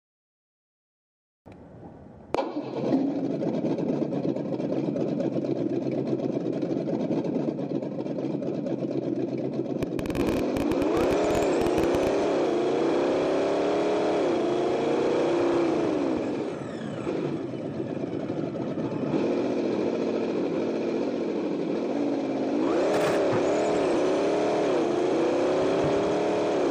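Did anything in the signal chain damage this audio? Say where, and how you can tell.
Yes. A train of clicks runs from 9.83 to 12.08 s: roughly 40 similar pulses at about 16 per second, irregularly spaced and peaking about 10 dB above the programme. Repeated impulses like these, riding over everything, most likely come from interference picked up in the analogue wiring.

Compressed frames skipped at 12.24 s and 23.94 s, at the codec or storage stage. At each point the sound leaps forward by about 300 ms, roughly three frames of 92.9 ms.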